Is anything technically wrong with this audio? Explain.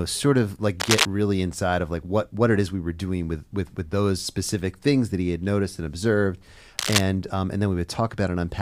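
Yes. Cable scratch noise occurs twice: from 0.80 to 1.06 s, between "sort of like" and "really inside of like", and from 6.78 to 7.01 s, after "had noticed and observed" and before "um and". Each burst is a dense, irregular scratching roughly as loud as the speech itself. The likely cause is a worn cable or connector being moved, so its contact resistance fluctuates rapidly and injects crackling noise.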